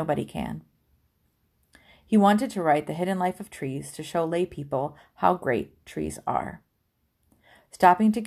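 From 0.14 s to 8.23 s, clock slip clicks tick through the speech about every 50 ms, a soft rattle, likely from two unsynchronised clocks about 500 ppm apart dropping or repeating a sample. A spectrogram shows faint, evenly spaced vertical lines, and the waveform shows tiny single-sample steps.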